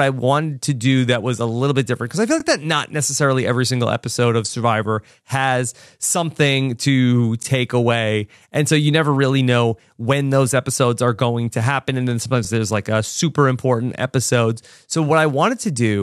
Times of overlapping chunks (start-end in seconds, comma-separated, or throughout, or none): 2.40-2.43, 7.43-7.45, 12.45-12.47